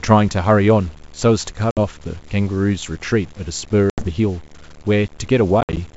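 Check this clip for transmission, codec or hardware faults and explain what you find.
Three faults are present in this speech, carried over G.722 wideband telephone coding that shows faint or no damage of its own.

Video or display buzz runs throughout, about 30 dB below the speech. A screen or video cable couples into the audio, producing a 75 Hz field-rate buzz with hash above it. On a spectrogram it appears as steady horizontal lines at 75 Hz and its harmonics.

Gritty, grainy distortion follows the speech level throughout, with noise roughly 30 dB below the signal. It likely comes from truncation to about 7 bits without dither. The waveform shows visible steps.

Packet loss on an ADPCM call cuts hard-edged holes at 1.71 to 1.79 s (60 ms lost), 3.90 to 4.07 s (80 ms lost), and 5.61 to 5.78 s. The last event is 90 ms lost, scattered over 160 ms, with a longest gap of 60 ms. After each gap the decoder's predictor and step size have drifted, so speech returns slightly distorted. 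On the waveform each loss is a silent gap followed by briefly distorted speech.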